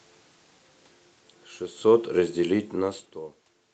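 From 1.74 s to 3.67 s the automatic gain falling fault takes hold: having judged the input too loud, or its background noise too strong, the gain control steadily turns itself down by about 10 dB. The speech and the room noise behind it sink together, so the ending sounds quieter. On a waveform the envelope tapers across those two seconds, and a spectrogram shows every band, the noise floor included, darkening evenly up to the 8 kHz ceiling.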